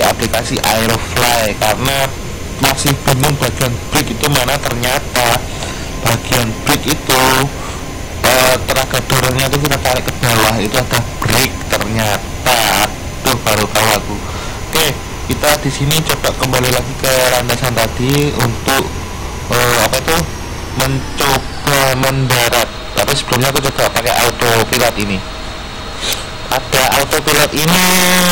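Throughout the recording, an integer overflow affects the loudest moments. A gain stage drove the signal about 7 dB past the largest value the integer format can hold, and instead of being held at the ceiling, those samples wrapped around to the opposite extreme. Only around two percent of samples cross that line, but each one jumps across the full range, so loud peaks burst into harsh, violent cracks far sharper than ordinary clipping.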